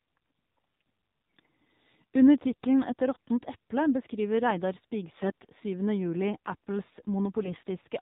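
From start to finish the speech sounds thin, buzzy and synthetic, with nothing above 4 kHz and a plainly audible coarseness. This is the AMR narrowband mobile codec. The audio has been squeezed to 8 kHz sampling, and each 20 ms frame is rebuilt from a vocal-tract model driven by only a few pulses. The degree of buzz fits a low mode of around 7.4 kbps.

Four short stretches turn hoarse, scratchy and gargly while pitch and loudness hold roughly steady: 1.39 to 1.50 s, 3.16 to 3.29 s (ending just before "eple beskriver"), 5.22 to 5.46 s, and 7.43 to 7.63 s. These are AMR bit errors. On a weak link, a few percent of the less protected bits arrived flipped, but the checksum over the critical bits still passed. The excitation pulses were therefore placed wrongly and the fine pitch, gain and spectral values went astray. The second burst has the highest error rate, near one bit in ten.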